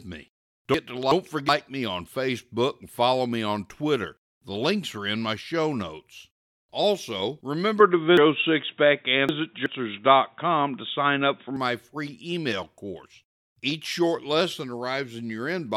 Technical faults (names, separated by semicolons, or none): chunks out of order; input switched to a poorer device